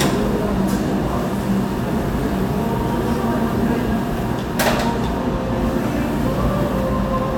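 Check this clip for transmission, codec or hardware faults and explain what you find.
Checking this clip turns up no faults to explain.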